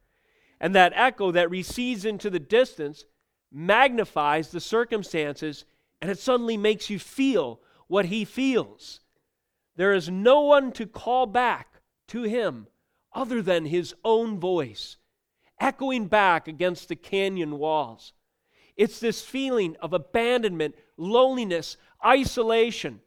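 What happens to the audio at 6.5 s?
Nothing goes wrong at 6.5 s; the speech carries on intact through that moment.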